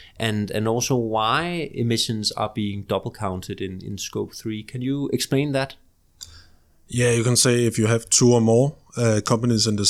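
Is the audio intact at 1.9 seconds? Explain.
Yes, the speech at 1.9 seconds is intact, with no audible fault at that moment.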